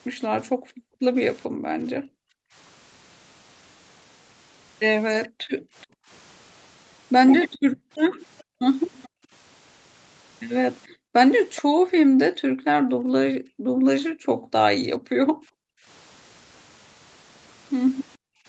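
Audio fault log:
0.52–2.55 s, 5.28–6.09 s, 7.59–9.31 s, 10.88–15.87 s and 18.17–18.47 s, background gated by the echo canceller: the room tone keeps ducking as much as about 40 dB, with the canceller clamping the mic while the far end plays.
5.23–5.86 s, 7.52–9.08 s and 10.86–11.62 s, echo leak: a faint copy of the speech trails by 427 ms at about 25 dB down, rising to about 20 dB down in the last one, likely loudspeaker pickup the canceller didn't fully remove.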